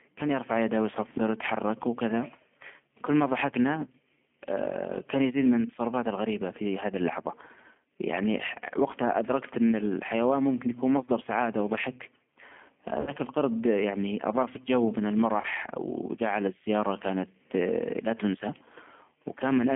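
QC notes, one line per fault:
Throughout: G.729 codec. The speech sounds slightly rough and synthetic, thin and boxed in, with the line band running from about 200 Hz to 3.4 kHz and nothing above 4 kHz getting through. The damage is plainly audible. It fits an 8 kbit/s G.729A link, which keeps only a vocal tract filter, a pitch predictor and a handful of pulses for each 10 ms frame and discards the finer detail of the waveform.
13.01 to 13.14 s and 15.41 to 15.47 s: VoIP packet loss concealed by the speech codec. At each point the speech smears into a stretched sound that sags in level. The first comes just before "القرد يعني أظاف جو" and the second just after "يعني أظاف جو من". The gaps point to about 60 ms and 30 ms of lost packets. The decoder repeated its last pitch and filter while lowering the gain. Because each frame builds on the one before, the voice stays weak for a moment after the packets return.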